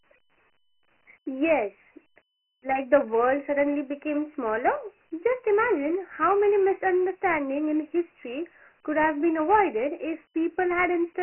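Throughout the speech, the sound carries Dialogic VOX ADPCM damage. Nothing survives above 3 kHz, which points to 4-bit OKI ADPCM at 6,000 samples a second, roughly 24 kbps. Heavy quantisation leaves a gritty hiss riding on the speech, with thin low end below about 250 Hz.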